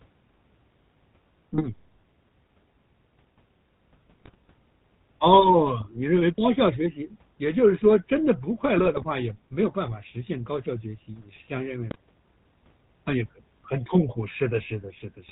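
Speech throughout carries the buzzy, gravelly roughness of the GSM full-rate codec, consistent with its 13 kbps coding. Nothing reaches above 4 kHz, and the pulse-driven excitation leaves a grainy rasp instead of the smoother, breathier dulling of a plain narrowband telephone filter. GSM bit errors break in at 1.53–1.67, 4.20–4.35, 5.80–5.89, 8.78–9.08, 11.88–12.00 and 14.58–14.73 s. Corrupted filter, pitch and gain values make the sound squawk, pop and gargle, with jumps in level, rather than dropping to silence as packet loss would.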